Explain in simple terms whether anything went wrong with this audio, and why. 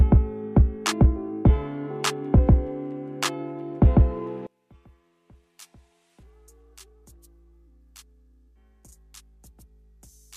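From about 4.47 s to the end, the sound suddenly drops to a faint trace. This is likely one channel inverted: one side of the stereo pair is flipped upside down, so when both sides are mixed together, everything they share cancels out.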